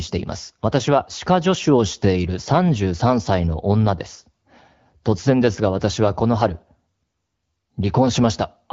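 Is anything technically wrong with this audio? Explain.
No, nothing here is technically wrong with it.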